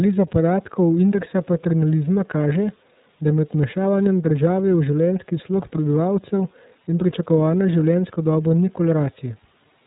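A speech clip run through the iLBC codec from start to finish, and the damage is plainly audible. The band stops at about 3.8 kHz, so sibilants and breathiness are dulled and it sounds like a phone line. Each 30 ms frame has its excitation coded on its own, which leaves the voice slightly rough and synthetic. It runs at 13.33 kbps, the rate of iLBC's 30 ms mode.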